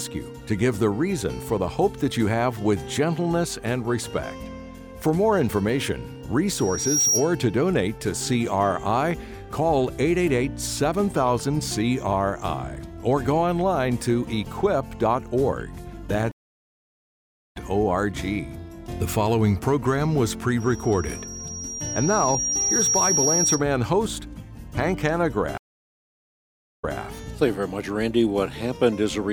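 At 6.54 s a loudspeaker feedback squeal starts: a single tone at 5.7 kHz swells over roughly half a second and holds a few dB above the program until 7.33 s. A microphone is picking up its own loudspeaker, and at that frequency the loop gain exceeds one, so the tone feeds itself. The same 5.7 kHz squeal returns from 20.60 to 23.65 s, this time building more slowly, over about two seconds, to a similar level.

At 16.32 s a stream reconnect cuts the audio to silence for 1.21 s. When the connection re-establishes and a fresh decoder starts, the sound resumes at 17.57 s roughly one and a half seconds further on than where it broke, so that stretch is skipped. A second reconnect at 25.58 s brings another 1.22 s gap, but here the audio comes back about 0.21 s earlier than the break point, so a short piece repeats before the reconnect ends at 27.0 s.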